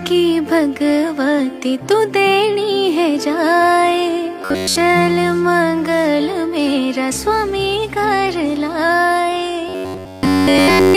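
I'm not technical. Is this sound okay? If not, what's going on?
No. Robotic sound from repeated short buffers at 4.42 to 4.76 s and 9.69 to 10.97 s: a metallic buzz near 94 Hz, likely from tiny snippets looping when new audio arrived late.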